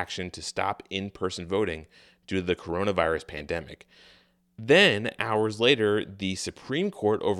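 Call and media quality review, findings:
No audible faults found in the speech recording; nothing to attribute to any component.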